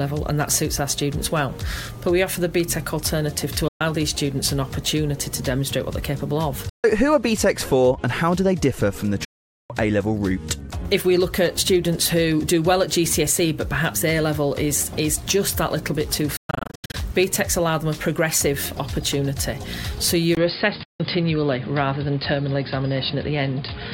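The first gap opens at 3.68 s and runs to 3.81 s, about 120 ms of dead air, and when the sound comes back it has moved on, as if it kept playing in the silence. That's the signature of a Bluetooth dropout, likely packets arriving too late for the headphones and being thrown away. It happens again from 6.69 to 6.84 s (about 140 ms) and for a long stretch from 9.25 to 9.70 s (about 450 ms). Between 16.37 and 16.94 s the losses come in bursts, roughly 390 ms lost in total, with the longest single hole around 120 ms.

At 20.35 s there's a brief 20 ms silence, and from there to the end everything sounds duller and boxier. Nothing comes through above 5 kHz, and a new noise floor sits roughly 30 dB under the signal, though the loudness barely changes. That points to an input switched to a poorer device, likely a move to a narrower-band microphone or a headset call profile. One last dropout lands inside that stretch, from 20.83 to 21.00 s, about 160 ms.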